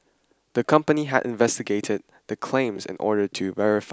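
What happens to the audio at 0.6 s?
Nothing goes wrong at 0.6 s; the speech there plays through intact, with no dropout, click, distortion or other audible fault.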